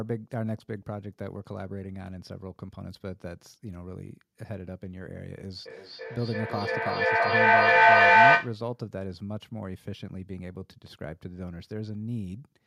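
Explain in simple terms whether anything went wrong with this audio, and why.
Two devices in the same room were on one call, causing feedback echo between two devices: one played the other's audio, whose microphone caught it again. From 5.65 to 8.61 s the speech repeats roughly every third of a second, thinner and ringing, piling up louder than the original.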